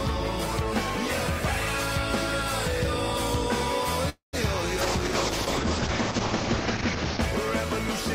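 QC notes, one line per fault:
4.09 to 4.35 s, call audio freeze: the sound stalls for about a quarter second, the last moment stretched into a fading buzz that drops to silence for roughly 130 ms, then resumes where it left off. Nothing is lost, only delayed, likely from packets held up in transit draining the jitter buffer.
4.83 to 7.27 s, call bitrate drop: the encoder rate falls from 32 to 8 kbps for about 2.4 s, and the audio turns coarse and watery. Bandwidth also narrows from 20 kHz to 8 kHz, so the top end is cut and the sound dulls until the rate recovers.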